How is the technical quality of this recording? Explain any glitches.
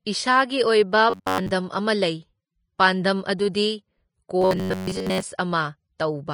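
The recording has clearly audible technical damage throughout, plus two stretches of robotic buzz and one smeared attack.

Throughout, the audio is hissy and grainy. This is likely Vorbis compression at a low bitrate, near 29 kbps. Unlike band-limiting alone, the remaining treble is coarse and noisy.

From 1.10 to 1.51 s and again from 4.42 to 5.23 s, the speech turns into a rigid metallic buzz at 93.8 Hz. This is robotic sound from repeated short buffers, likely caused by audio arriving too seldom. Most of each stretch is a repeated chunk of about 10.7 ms, and that repetition rate sets the fixed pitch. Codec grain has no steady pitch like this.

At 5.38 s, pre-echo puts an 11 ms hiss just before an attack and softens it. Codec noise spread across the block leaks ahead of the transient, unlike an echo, which follows it.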